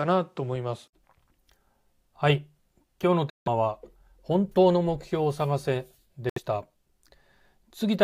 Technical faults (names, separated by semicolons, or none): Bluetooth dropout